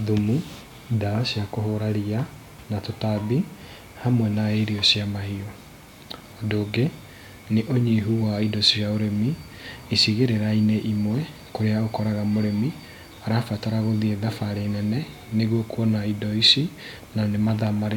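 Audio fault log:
No faults heard.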